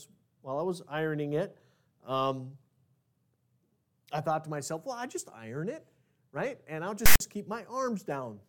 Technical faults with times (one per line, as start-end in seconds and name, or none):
7.06-7.20 file tags played as audio